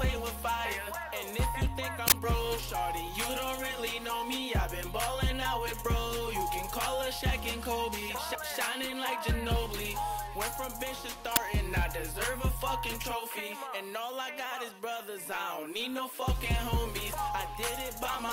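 Uninitialised buffer at 2.08 to 2.12 s and again at 11.36 s: blocks of about 40 ms and 10 ms played before audio filled them, releasing leftover memory as loud cracks or bursts of digital noise.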